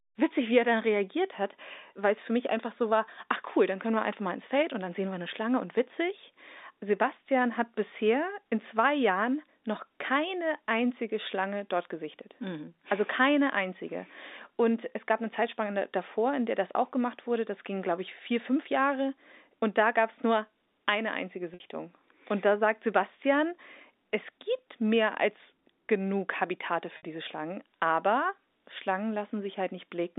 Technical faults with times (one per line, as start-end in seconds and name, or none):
21.54-21.60 packet loss with pitch repetition
26.97-27.03 packet loss with pitch repetition